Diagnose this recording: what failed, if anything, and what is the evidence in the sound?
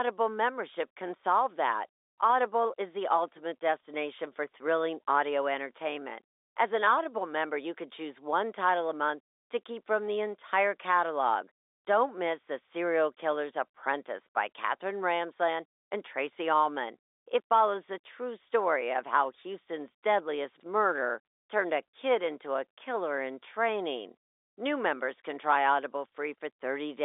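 Nothing failed: the speech carries the narrow 300 Hz to 3.6 kHz band of a G.711 mu-law telephone line at 64 kbps, with any coding damage no more than faint.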